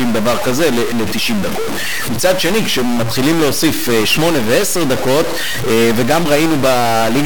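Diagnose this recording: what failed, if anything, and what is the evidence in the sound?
The speech carries a harsh, buzzy distortion for the whole clip, not just on loud syllables. The pauses are not quiet. They fill with a coarse noise floor. This points to a stuck bit, likely from a broken data line or a faulty converter. One bit holds a fixed value. About half the samples jump by its weight, roughly minus 15 dBFS, a high bit. That step rides the waveform as buzz and flips around zero, filling the silence.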